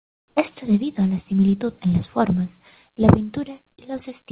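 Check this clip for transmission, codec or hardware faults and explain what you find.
One fault stands out, at the very start, heard through a telephone-band path with nothing above 4 kHz.

From 0.00 to 0.36 s the background is comfort noise in place of the real background: a steady, featureless hiss about 6 dB quieter. The likely cause is discontinuous transmission, with the receiver synthesising noise during the sender's silence. On a spectrogram this shows as a smooth, textureless band ending sharply at 0.36 s, and in the waveform as a lower, flat envelope.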